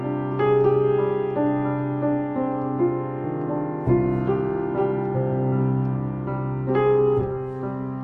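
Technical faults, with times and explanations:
Nothing stood out on listening.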